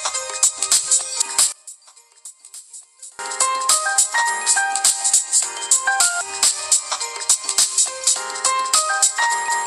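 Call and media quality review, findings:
Sharp level collapse from 1.52 to 3.19 s, about 22 dB down. Centred content and low end nearly gone; only a faint residue remains. Likely one channel inverted upstream, so matching left and right signals cancel on mono fold-down. Recovers at 3.19 s. Check channel polarity in the capture or mixing stage for that interval, then confirm with a mono sum.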